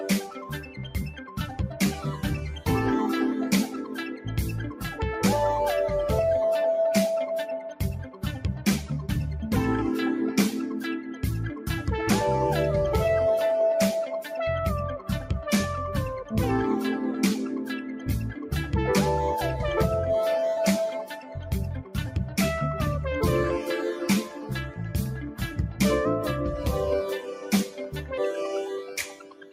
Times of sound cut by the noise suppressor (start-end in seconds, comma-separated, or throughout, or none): 0.26-1.58, 3.85-4.83, 7.64-8.23, 11.01-11.68, 17.97-18.49, 21.21-21.96, 24.25-25.41, 27.20-29.53